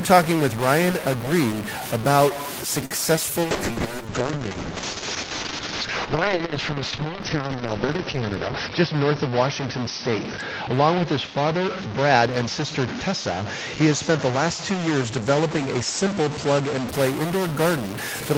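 Throughout the speech there is distortion, with a hiss filling the pauses. This is most likely a stuck bit, where one data bit stays fixed and knocks values off.

At 2.85 to 2.93 s a short stall from a late packet holds the sound for about 52 ms while the jitter buffer sits empty. Nothing is lost, but the stretch carries a slight buzz or dip.

At 3.17 to 3.19 s, short concealed packet loss drops about 20 ms of audio. The receiver patches the gap by extending the previous sound, heard as a brief smear.

From 3.43 to 16.95 s a call bitrate drop takes the encoder from 32 to 7 kbps and narrows the bandwidth from 20 kHz to 6 kHz. The speech turns muffled and watery, worst over a stretch of about 5.3 s.

Inside the bitrate drop, at 8.48 to 9.05 s, a jitter buffer speed-up plays the audio at 110% by removing pitch-period slices totalling around 70 ms. The pitch holds, but the speech sounds hurried.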